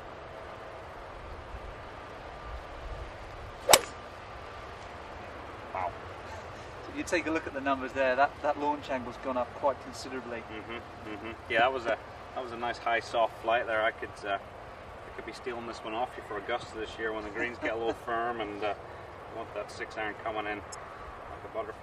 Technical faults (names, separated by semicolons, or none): corrupt frame decoded